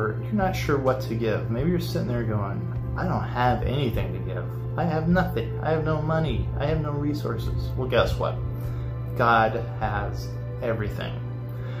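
The signal runs without any audible technical fault from beginning to end.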